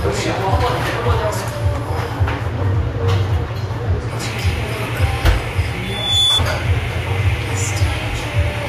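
Loudspeaker feedback squeal from 5.83 to 6.42 s. A microphone picked up the loudspeaker it was driving, and at 3.5 kHz the gain around that loop rose above one, so the tone fed on itself. It is heard as a thin, piercing whistle that swells over roughly a third of a second, climbing to a few decibels louder than the surrounding sound before it stops, about 0.6 s after it began.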